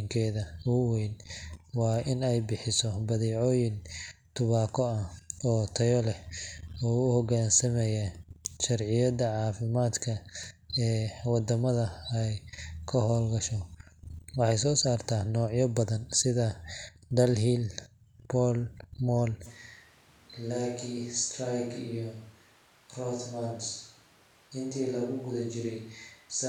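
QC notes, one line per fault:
19.47 s to end: switch to a distant microphone. The speech abruptly turns roomy and hollow, thinner in the bass and about 5 dB quieter, with room noise rising to roughly 25 dB below the speech. The close microphone likely dropped out, leaving a farther pickup.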